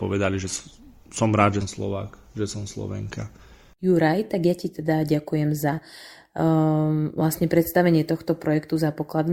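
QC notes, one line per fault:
1.61 to 1.66 s, compressed frames skipped: the speech lurches forward, losing about 150 ms, which fits roughly seven 20 ms frames never making it to playback.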